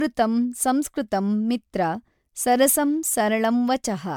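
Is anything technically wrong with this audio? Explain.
Yes. Throughout the speech there is generation loss, likely from repeated MP3 encoding, about seven passes at a rate that points to roughly 137 kbit/s. Each pass requantises on a shifted frame grid, so the errors accumulate into a swirly, hollow, smeared sound with softened consonant attacks, and content is cut off at 20 kHz.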